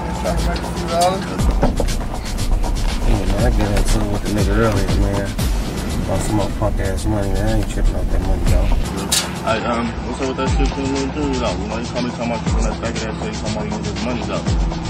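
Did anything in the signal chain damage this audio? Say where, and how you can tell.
Yes, at the network stage: an adaptive stream switching to a lower bitrate at 9.50 s, lasting to the end. The treble abruptly cuts off around 8.3 kHz with no gap and codec artefacts thicken, which fits the player stepping down from roughly 128 to 32 kbit/s MP3 when the connection slowed.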